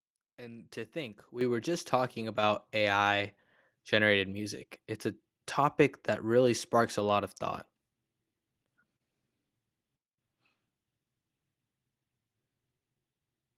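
At 1.41 s the microphone volume is stepped up by about 8 dB, and at 2.43 s it jumps again by about 4 dB. The call software raised the device's input gain in discrete increments, so speech and background noise get louder together, instantly. On a waveform the envelope widens abruptly at each point. On a spectrogram every frequency band, including the noise floor, brightens at once along a vertical boundary.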